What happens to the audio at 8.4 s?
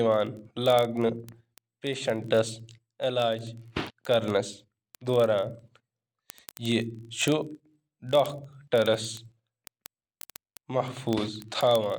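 At 8.4 s the speech is inside a run of word clock ticks lasting from 0.12 s to 11.98 s. The receiving device runs on its own clock, not locked to the sender's, and the two drift apart by roughly a tenth of a percent. Each time they slip past each other a single sample is dropped or repeated. The result is a sharp tick about every 20 ms, a steady buzz-like pattern of clicks of uneven strength.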